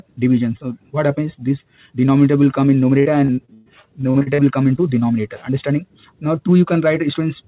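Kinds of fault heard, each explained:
Repeated packet loss (robotic sound): From 3.0 to 4.40 s, about a dozen holes keep hitting the audio, the longest about 120 ms. Each gets patched by stretching the last bit of sound, so roughly a third of that stretch is filler, giving a choppy, robotic texture with pieces gone.
Short concealed packet loss: Around 4.76 to 4.79 s, a tiny chunk of audio arrived too late to decode. The receiver bridged it by carrying the previous sound forward and then blending back into the real signal, so you get a quick smear or wobble there.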